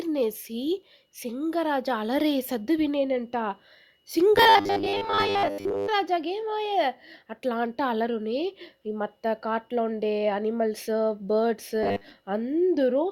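New audio is likely arriving too seldom, so the software keeps replaying a short buffer of about 10 ms and skips real speech in between. The speech then picks up robotic sound from repeated short buffers, a rigid metallic buzz at 100 Hz that loosely tracks the speech. It first appears from 4.36 to 5.88 s, with roughly seventy percent of the time filled by repeats, and again from 11.83 to 12.14 s, with about half repeated.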